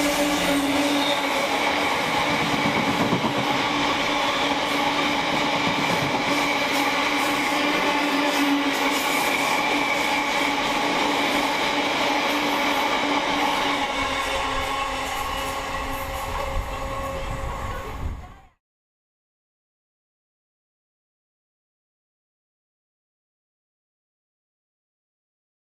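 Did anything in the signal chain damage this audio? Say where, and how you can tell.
No, nothing in the signal chain stood out as damaging this audio on listening.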